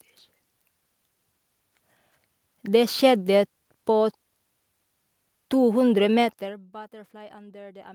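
No technical faults are audible anywhere in this speech recording.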